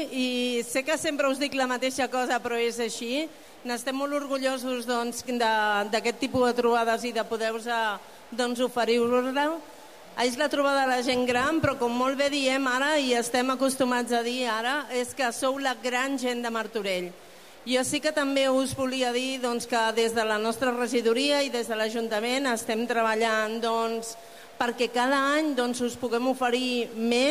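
A single data bit in the sample path appears to be frozen at one value, most likely from a broken data line or a faulty converter, and the result is a stuck bit affecting the whole clip. Roughly half the samples are pushed off by that bit's weight, a step of around -50 dBFS, so the sound carries a grainy noise that follows the waveform, and quiet gaps fill with a low, gritty noise floor instead of falling silent.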